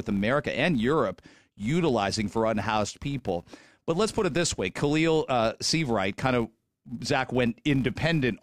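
Throughout the speech, a filter restarted on every block produces a steady buzz at about 172 Hz, which fits a 256-sample block. Each block opens with a small transient as the filter starts from silence. Unlike mains hum, it rises and falls with the speech level.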